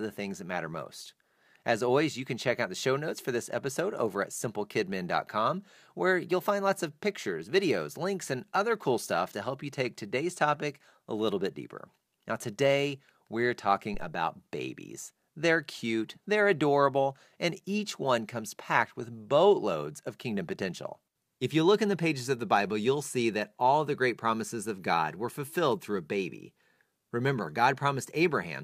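At 13.94 s there's a phantom power thump: a deep, low bump that lasts until about 14.10 s, peaking at about -27 dBFS and dying away in roughly 36 ms. That's the signature of a supply being switched on a live input, with the sudden voltage step pushed through the coupling capacitors as a single low-frequency pulse. It's fairly quiet and brief here, so it reads as a soft thud.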